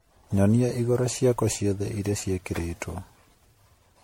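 Throughout, the speech sounds swirly, hollow and smeared, with blurred consonant attacks and nothing above 16.5 kHz. This is generation loss, likely from around seven MP3 passes at what sounds like 64 kbit/s, each re-quantising on a shifted frame grid.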